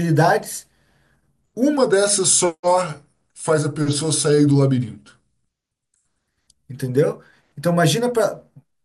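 From 1.77 s to 6.28 s, a section at the wrong speed plays at 0.893 times its recorded rate, likely from playback against a mismatched clock. The speech drops about two semitones and drags. On a spectrogram, harmonics sit lower and stretch out in time.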